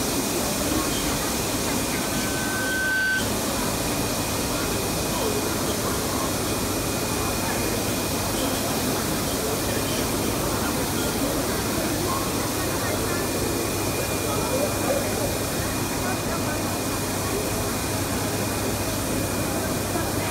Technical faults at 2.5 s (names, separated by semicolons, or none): loudspeaker feedback squeal